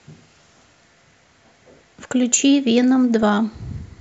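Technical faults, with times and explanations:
3.23 s, DAB burbling: A brief burst of burbling hits the speech. Weak reception let bit errors slip past error correction into the MP2 data, which fits a bit error rate of a small fraction of a percent. Corrupted samples put short blips of noise into single sub-bands.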